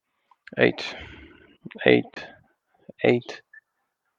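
A Bluetooth dropout at 2.13 to 2.17 s leaves about 23 ms of silence in the speech, likely from a lost wireless packet; playback resumes as if it had continued.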